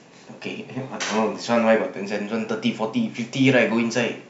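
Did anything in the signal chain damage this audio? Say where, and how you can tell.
No, nothing in the signal chain can be heard damaging this speech recording at any stage between capture and playback.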